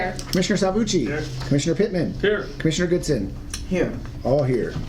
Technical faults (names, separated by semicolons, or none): none